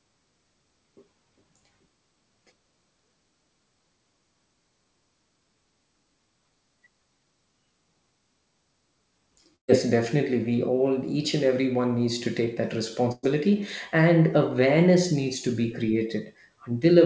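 A burst of packet loss hit this speech recording twice, at 9.56 to 9.71 s and 13.12 to 13.26 s, each dropping about 120 ms. The receiver stretched the last sound across each hole, fading it out, so a brief buzz or hiss replaces the missing stretch before the speech resumes further on.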